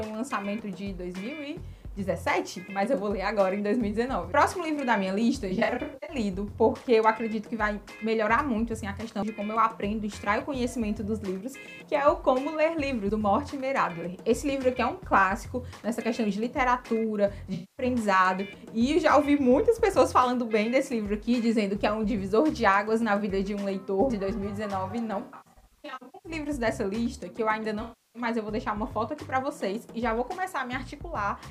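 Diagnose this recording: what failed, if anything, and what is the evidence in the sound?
The failure is in the codec and transport chain: AAC frame loss with concealment at 5.49–6.16 s, 17.54–17.85 s, 25.22–26.32 s and 27.82–28.22 s. Each patch sounds smeared, noisy or phasey, as the decoder rebuilds missing frames from the last good spectrum. The first and third are scattered dropouts with longest runs of around a tenth of a second. On a spectrogram these show as frozen, blurred spectral bands, and the waveform shows softened, dipping envelopes.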